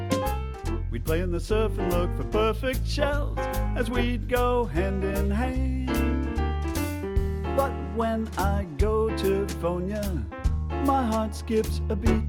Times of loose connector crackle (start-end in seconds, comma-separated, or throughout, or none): none